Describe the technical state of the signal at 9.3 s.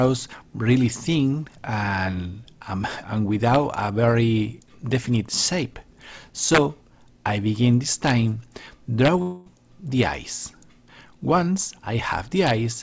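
At 9.3 s the signal sits inside a gap from 9.22 to 9.48 s, likely a long network dropout. About 240 ms of audio is lost, and the receiver fills it by extending the preceding sound as a decaying buzz before normal audio resumes, band-limited to 8 kHz by the G.722 path.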